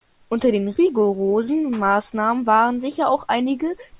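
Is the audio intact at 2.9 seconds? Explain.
Yes, at 2.9 seconds the speech is intact, with no dropout, click, distortion or other fault.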